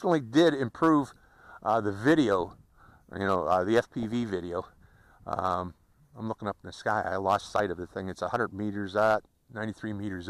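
From 4.00 to 4.30 s the audio breaks into DAB burbling, short blips of noise in single sub-bands. Weak reception let bit errors, roughly two per thousand, past error correction into the MP2 data. This corrupted the audio data across what sounds like about fourteen damaged frames.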